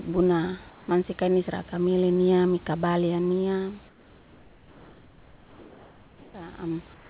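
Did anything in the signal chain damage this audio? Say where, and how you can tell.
Yes: at the call-processing stage, the sender's discontinuous transmission likely gated the pauses. Comfort noise in place of the background appears at 0.70–0.88 s (before "mansia kainis raka mele"), 3.88–6.34 s (after "niam mika balya niam") and 6.94 s to the end. The room tone becomes a steady, featureless hiss about 3–4 dB quieter.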